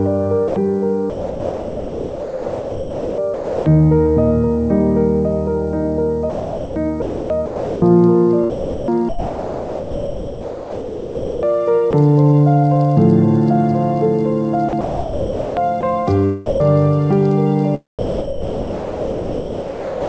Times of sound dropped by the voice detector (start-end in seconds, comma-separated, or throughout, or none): 0.48-0.56, 16.46-16.60, 17.99-20.08